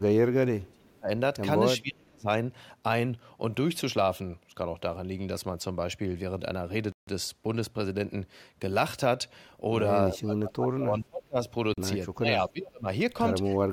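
A speech clip with two faults. An echo canceller, likely confused by both sides talking at once, turns the voice down as speech suppressed in double talk: deep drops of around 30 dB or more at 0.0–1.09 s, 1.78–2.27 s, 10.13–11.37 s and 12.15–12.88 s. A Bluetooth stall, likely interference leaving the headphone buffer empty, cuts the sound to silence for 152 ms at 6.92 s and 40 ms at 11.74 s before playback resumes.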